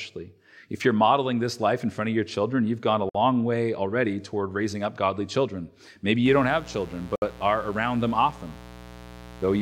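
Gap between stream segments at 3.09 to 3.15 s: mismatched timestamps on 4-second segments leave about 54 ms of hard-edged silence, cutting briefly through the speech with nothing lost.

Mains buzz from 6.25 s to the end: sharp switching spikes at twice the 60 Hz mains rate stack harmonics into the kilohertz range, producing a steady, raspy buzz roughly 20 dB below the speech.

A second gap between stream segments follows at 7.16 to 7.22 s: a 65 ms silent hole at the next segment boundary.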